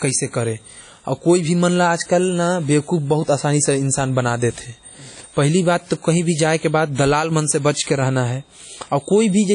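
Throughout the speech, a ringing, washy smear hangs around each sound, with hiss swelling and fading alongside the signal, likely from WMA compression at a rate that fits about 32 kbps. A spectrogram shows a hard ceiling at 10.1 kHz and patchy, blocky gaps below it.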